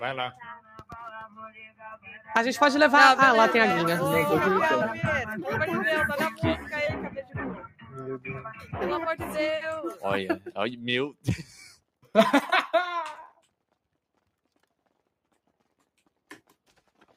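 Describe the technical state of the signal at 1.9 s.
At 1.9 s the signal sits inside a stretch of sound cut by the noise suppressor, running from 1.68 to 2.29 s. A suppressor tuned for speech has judged this material to be noise and pulled it down harder than its surroundings, by about 11 dB at the deepest point, with roughly 300 ms of the span affected. The steady part of the sound sinks and its decay is clipped short. On a waveform this shows as a sudden dip in the envelope. On a spectrogram the sustained energy fades into a darker patch while any sharp onset stays visible.

This moment also falls within a noise suppressor applied to music or sounds that runs through the whole clip. Held tones, ambience and tails are continually treated as noise, so the gain keeps riding up and down by around 5 dB. The sound pumps and thins as attacks pass through while what follows them is pushed down. 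A waveform shows an envelope that keeps breathing rather than sustaining. A spectrogram shows sustained bands flickering and tails that stop abruptly instead of tapering.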